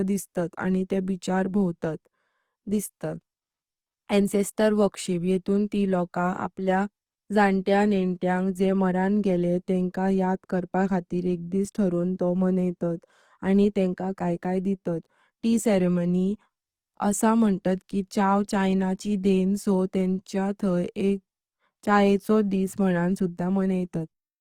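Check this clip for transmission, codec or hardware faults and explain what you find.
One fault runs through the whole recording, plainly audible from start to finish. Throughout, the speech sounds rough and grainy, with a noisy, sandy texture on voiced sounds instead of clean harmonics, while the full high-frequency range stays present. This is likely Opus compression in its music-oriented CELT mode. At a bitrate that sounds like roughly 24 kbps, the encoder runs short of bits and fills bands with folded or noise content, roughening the tone.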